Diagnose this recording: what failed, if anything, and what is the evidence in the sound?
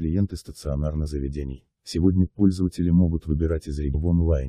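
Damaged data in a compressed stream appears at 1.06 to 1.08 s and again at 3.94 s, each a brief glitch in the speech. This is a codec-stage fault: corrupted bytes made the decoder misread frames, lose sync, and hunt for the next valid frame header.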